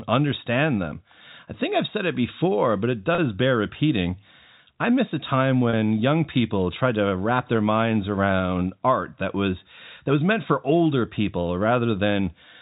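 Around 3.15 to 3.18 s, after "it before but it", and again at 5.70 to 5.73 s, after "I miss a time", there's packet loss with pitch repetition. About 30 ms drops out each time, which points to one lost packet, and the receiver bridges it by repeating the last pitch period, so you hear a brief held, buzzy smear under the G.711 telephone band.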